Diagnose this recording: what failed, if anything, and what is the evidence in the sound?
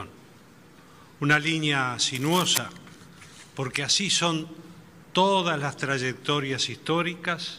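From 2.15 to 2.58 s a dense, ragged burst of scratching rides over the sound, about 5 dB quieter than it. This is cable scratch noise in the analogue wiring, likely from a worn cable or connector being moved, its contact resistance fluctuating rapidly.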